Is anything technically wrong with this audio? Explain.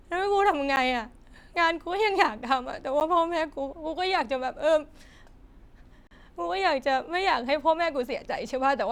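Yes, the speech drops out three times as blocks of digital silence: about 10 ms at 0.76 s and 3.00 s, then 40 ms from 6.07 to 6.11 s. Samples were zeroed, likely from an unfilled buffer, so the first two tick and the longer one leaves a short hole.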